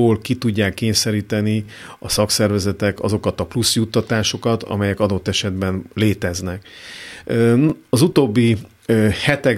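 At 1.66 to 1.68 s, between "ki tudják kényszeríteni" and "a szakszervezetek azokat a", and again at 7.70 to 7.72 s, overlapping chunks cause a stutter: processing in 3-second blocks started each block early, so 20 ms of speech plays twice at the join.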